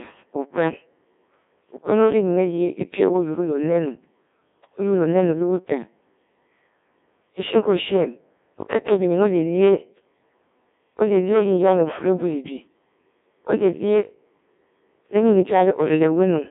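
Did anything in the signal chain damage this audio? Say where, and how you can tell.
Yes, at the codec stage: a Codec 2 vocoder runs throughout, heavily damaging the speech, which fits a rate of about 1.6 kbit/s. Since only pitch, voicing, energy and envelope survive, sine-wave resynthesis sounds robotic and buzzy. A spectrogram shows rigid synthetic harmonic combs, nothing above 3.6 kHz or below 150 Hz, and a waveform unlike the original.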